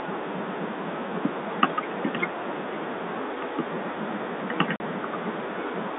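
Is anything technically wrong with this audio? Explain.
Yes. At 4.76 to 4.80 s, packet loss filled with silence occurs. A stretch of audio never arrived at the receiver, and instead of concealing the gap it played silence for 40 ms, which fits two consecutive 20 ms packets going missing. The speech drops out abruptly and comes back just as abruptly, with hard cuts at each edge. The speech is carried over G.711 telephone coding, which limits it to roughly 300 Hz to 3.7 kHz.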